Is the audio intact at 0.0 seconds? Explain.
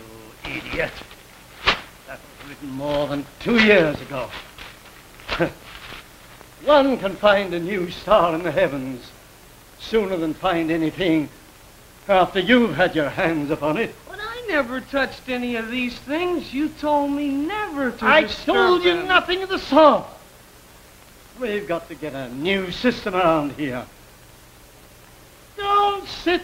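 Yes, at 0.0 seconds the audio is intact, with no dropout, click or other fault at that moment.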